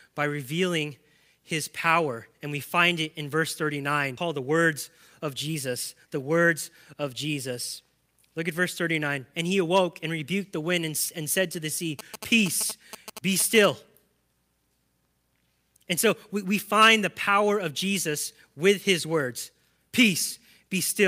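Skip ahead at 4.17 to 4.19 s: a stretch of roughly 0.7 s of speech was dropped while later audio was already queued, so playback jumps forward with no gap, and the two sides of the missing piece are spliced almost directly together.

Jitter buffer speed-up follows in three runs: 4.27 to 4.66 s at 110% speed, then 5.20 to 6.54 s and 6.94 to 8.02 s at 107%. The receiver held more audio than it wanted and trimmed many short pitch-period pieces, shedding roughly 50, 100 and 70 ms in the three runs. The speech sounds hurried without any change in pitch.

GSM signalling bursts from 11.99 to 13.66 s come from a nearby 2G phone signalling on the network. The audio circuit rectifies the radio bursts into a galloping dit-dit-dit of short 217 Hz buzzes, roughly 10 dB below the speech.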